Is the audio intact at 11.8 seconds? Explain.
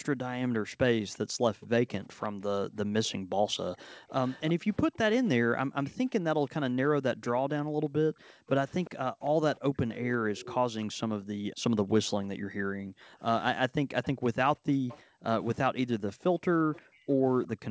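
No. At 11.8 s the recording sits inside background gated by the echo canceller, which runs from 0.0 to 17.7 s. While the loudspeaker plays, the canceller pulls the microphone down hard, by about 40 dB at its deepest, so the room sound sinks or vanishes and then returns when it releases. Unlike packet-loss dropouts, these dips follow loudspeaker playback and are not abrupt codec gaps.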